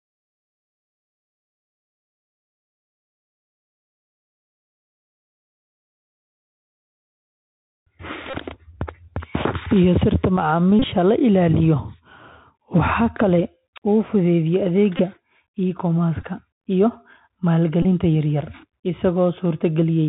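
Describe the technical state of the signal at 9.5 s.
At 9.5 s the speech passes through a Bluetooth CVSD headset codec, as it does for the whole clip. Nothing above 4 kHz survives. A one-bit up-or-down coder, which fits a 64 kbps link, lags on loud high sounds. S sounds turn scratchy, over a grainy hiss.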